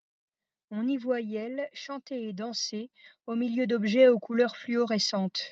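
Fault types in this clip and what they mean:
Automatic gain falling: the gain control judged the speech too loud and pulled its level down by about 6 dB, from 0.63 to 1.8 s, background sinking too.
Automatic gain rising: the control then judged the input too quiet and raised gain by about 12 dB from 1.85 to 5.4 s, speech and background swelling together.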